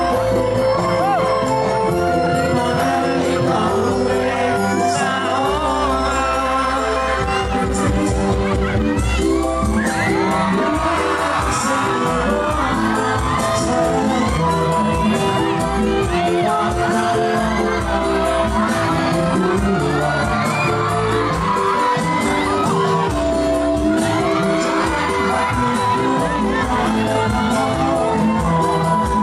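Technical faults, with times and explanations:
No technical faults can be heard anywhere.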